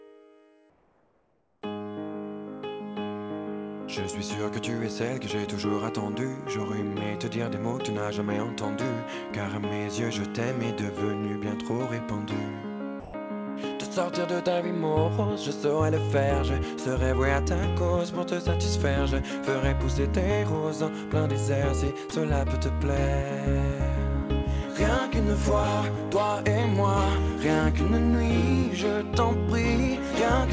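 From 0.70 to 1.62 s, about 0.92 s of the background is replaced by comfort noise. The background sits about 41 dB below the loudest passages, and in this stretch it turns into a steady, featureless hiss about 4 dB quieter, with none of the original texture. The likely cause is discontinuous transmission: the sender stopped sending during the pause, and the receiver filled the gap with synthetic noise shaped roughly like the background.

At 13.00 to 13.14 s, 140 ms of the sound itself is dropped by the voice detector. It gives way to that same flat noise and then resumes. A shorter dropout of 20 ms at 22.10 s leaves a brief hole in the sound. In both cases the likely cause is the sender's detector mistaking quiet sound for background and muting it. Throughout, the band stops at 8 kHz, which fits the G.722 call codec at 64 kbps.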